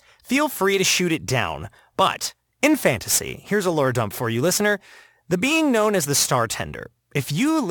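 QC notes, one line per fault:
Throughout: crude rate conversion. The speech appears to have been resampled by nearest-sample picking, with no interpolation or anti-aliasing filter, which fits a move from 44.1 kHz to 48 kHz. Some samples are simply repeated on a regular cycle set by the two rates, and the resulting timing error produces spurious tones with no harmonic relation to the voice. These sit roughly 20 dB below the speech and are heard as a gritty, inharmonic fizz that rides on louder and brighter syllables.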